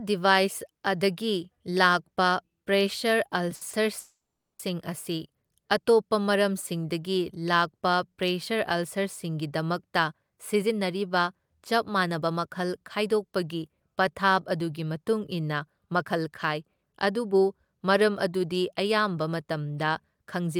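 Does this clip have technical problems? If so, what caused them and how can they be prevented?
Yes. Delayed packets likely emptied the jitter buffer, causing a call audio freeze from 3.99 to 4.60 s: a fading buzz, then about 450 ms of silence, before the sound resumes where it stopped. Steadier network delivery or a slightly deeper jitter buffer would prevent this.

A backlog in the jitter buffer made the receiver repeatedly cut pitch-period slices. This jitter buffer speed-up runs the speech 8% fast at unchanged pitch, sounding hurried, from 9.91 to 13.97 s and from 15.59 to 17.57 s, trimming roughly 300 ms and 200 ms. Smoother packet arrival, or a gentler catch-up rate in the receiver, would prevent it.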